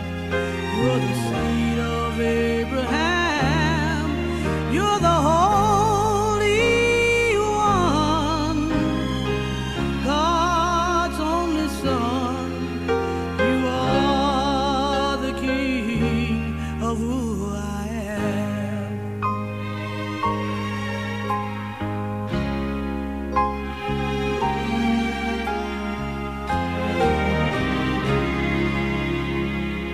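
No technical faults can be heard in this audio. Nothing in the sound points to a problem at any point.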